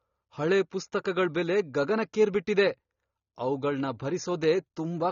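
Speech, with AAC compression damage throughout: nothing above about 6.9 kHz, dull and smeared, with fizzy sibilants, likely low-bitrate AAC-LC, around 24 kbps, starving the upper bands.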